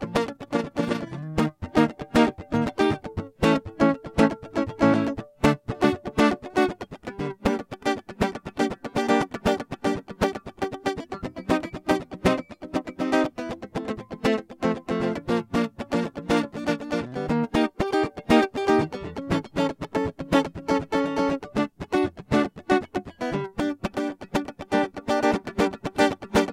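Music, with overlap-add ripple from 0.28 to 1.11 s: frames rejoined at a mismatched overlap make about 6 dB level flutter near 30 Hz, visible as regular waveform-envelope scalloping.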